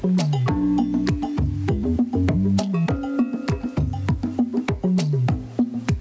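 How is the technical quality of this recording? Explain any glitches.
The technical quality is held back by gain pumping, which runs through the whole clip. The gain swings by roughly 10 dB. Loud and quiet passages sit unnaturally close in level, giving a flattened, squeezed character. The likely cause is input gain set far too high, with a fast limiter or compressor clamping down on each peak and releasing in the gaps. The call microphone processing, with nothing above 8 kHz, is normal.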